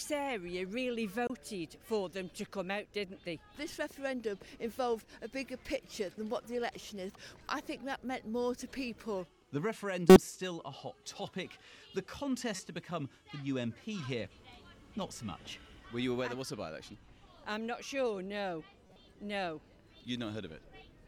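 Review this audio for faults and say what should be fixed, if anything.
Five short chirps and blips cut through the audio at 1.27–1.30 s, 5.49 s, 10.10–10.16 s, 12.54–12.60 s and 18.87–18.96 s. The burst at 10.1 s is the harshest, peaking near -10 dBFS, while the one at 5.49 s is the quietest, around -50 dBFS. This is a corrupt frame decoded: flipped bits in a compressed frame led the decoder to apply wrong gains or misread codes, throwing energy to the wrong frequencies for one to three frames each time. Adding error detection to the stream, so damaged frames are concealed or dropped rather than played, would prevent it.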